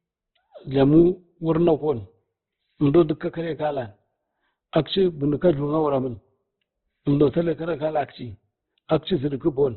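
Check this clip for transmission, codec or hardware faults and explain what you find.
One codec fault runs through the whole clip: Opus compression, likely, with heavy damage. Nothing survives above 4.2 kHz. Each band's energy is kept, but starved bands are filled with noise, so the speech sounds grainy and rough rather than swirling as MP3 would. That fits a very low bitrate around 12 kbps.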